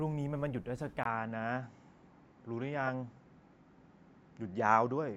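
Speech that goes dull at 1.03 s after a 20 ms gap, with nothing above 7.6 kHz and a faint new noise floor; likely an input switched to a poorer device. A spectrogram shows the top band vanishing there.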